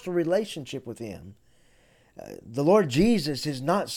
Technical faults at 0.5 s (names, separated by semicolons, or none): none